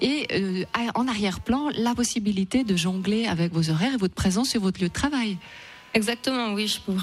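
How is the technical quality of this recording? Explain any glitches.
The technical quality is compromised by computer activity noise running through the whole recording. The computer's changing load, from the processor, graphics card or mouse movement, shifts the ground that the audio circuit shares with it, and that fluctuation leaks into the signal. The result is a buzzing, chirping texture pulsing at around 200 times a second, sitting roughly 30 dB below the wanted sound and rising and falling with the machine's activity rather than with the audio itself.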